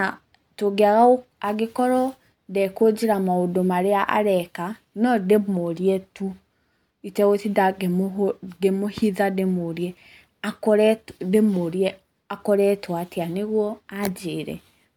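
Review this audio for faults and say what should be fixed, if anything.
Nothing stood out on listening, so there is nothing here that needs fixing.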